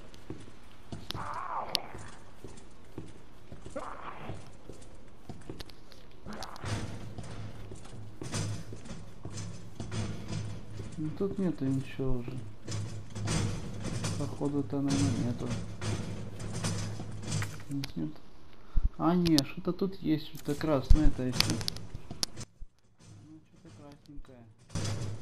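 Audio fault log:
22.43–24.75 s, one channel inverted: the sound suddenly drops by about 21 dB, likely because one channel's polarity is reversed, cancelling everything common to both channels.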